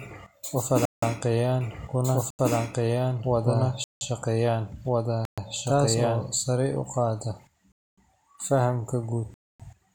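It's a speech recording with six blocks of digital silence, hard cuts to silence, at 0.85, 2.30, 3.84, 5.25, 7.72 and 9.34 s, lasting 85 to 256 ms. The 170 ms and 85 ms holes fit 8192- and 4096-sample buffers not filled in time. From 1.61 to 6.29 s there's a doubled audio track: a full-band copy at about the same level trailing by roughly a second and a half, likely a second, slower capture path.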